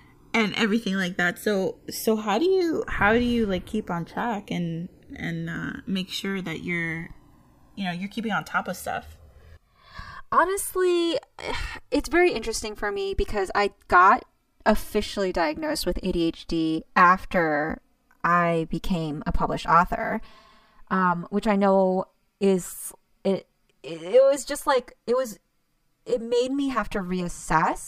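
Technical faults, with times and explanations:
Throughout, channels drifting apart: clocks roughly 300 ppm apart slide the inter-channel delay to about 7 ms, sweeping comb notches heard as slow flanging in mono.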